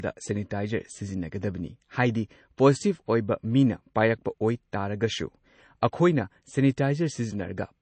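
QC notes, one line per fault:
throughout, MP3 compression: nothing above 8.3 kHz, and faint detail swirls on and off, unlike a clean low-pass; likely an encoder starved near 32 kbps.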